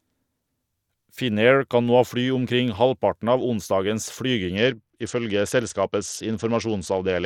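A Bluetooth SBC bit pool drop starts at 4.56 s, after "omkring halvparten av onsdagens", and runs to the end at 7.26 s. Consistent with a bit pool fall from 28 to 9, near 78 kbps, the upper sub-bands starve and the rest quantise coarsely, leaving the speech dull and gritty.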